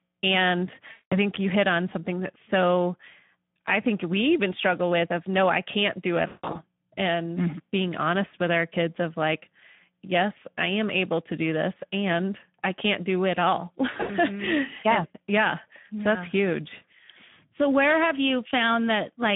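Speex codec damage runs through the whole recording. The encoder is starved of bits for the excitation signal, and the artefacts point to a rate of about 11 kbps. The speech comes through plainly noisy and hoarse, confined to a narrow line band of roughly 150 Hz to 3.6 kHz, so it sounds thin and gritty from start to finish.

VoIP packet loss concealed by the speech codec strikes first from 0.91 to 1.18 s, just before "you hit on something". Packets went missing and the decoder filled the gap by extrapolating from its last pitch and filter settings while lowering the gain. The result is a stretched, fading smear of sound, with the speech still weak for a moment after it resumes. The same failure returns at 6.27 to 6.57 s, right after "no i can't do". A third, broken-up episode spans 13.93 to 14.12 s, where short dropouts are spread over about 160 ms, the longest lasting 80 ms. These sputter as brief smears.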